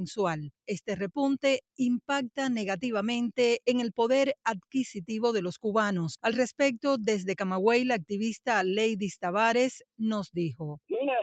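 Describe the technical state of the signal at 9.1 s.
At 9.1 s the signal is intact, with only the normal band limit of the call path, nothing above about 8 kHz, to be heard there.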